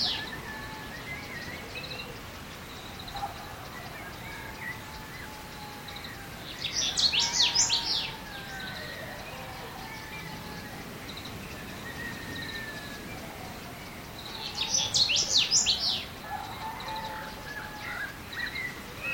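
No technical faults can be heard anywhere in the audio, with the signal holding steady and intact throughout.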